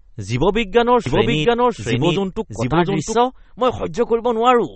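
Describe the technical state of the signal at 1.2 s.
At 1.2 s the speech is most likely MP3-compressed at a low bitrate, fitting about 35 kbps. The encoder drops everything above 8.4 kHz and switches weak frequency lines on and off, giving a watery, swirly sound. A spectrogram shows a hard ceiling at 8.4 kHz and flickering holes below it.

The same moment also falls inside a doubled audio track from 1.06 to 3.14 s. A second full-band copy runs about 0.7 s behind the original at roughly the same level, likely from an out-of-step edit or a slower capture path. The waveform shows overlapping syllables, with no decay tail.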